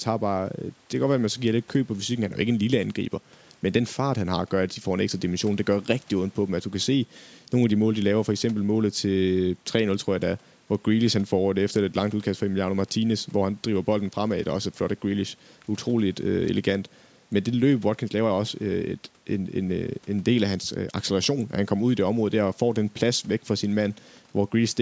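No technical faults can be heard in this speech; the call microphone processing leaves no sound above 8 kHz, which is normal for that path.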